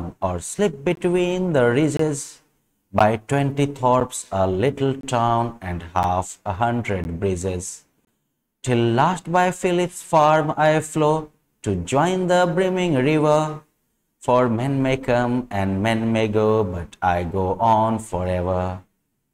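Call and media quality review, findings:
Gap between stream segments: segment timestamps don't abut, so the player pads each seam with silence, inserting 7 to 24 ms of extra time with no audio lost. Symptom: hard-edged dropouts recurring once per second, matching 1.0 s segments, at 0.95, 1.97–1.99, 2.99, 4.00, 5.01–5.03, 6.03, 7.04 and 8.05–8.07 s. Probable component: segmenter or packager timestamping at segment boundaries.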